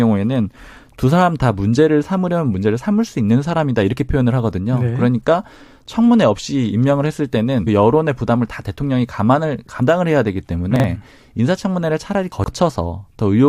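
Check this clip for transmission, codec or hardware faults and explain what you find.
Two kinds of fault turn up in this speech clip. Damaged data in a compressed stream hits at 7.66 to 7.68 s and again at 9.80 s: corrupted bytes make the decoder lose sync and hunt for the next frame, giving a short glitch. Then chunks out of order: around 10.76 to 10.84 s a 40 ms chunk lands one slot late, and at 12.32 to 12.48 s one arrives three chunks late. Nothing's missing, but the reshuffled order sounds jumbled across the hard joins.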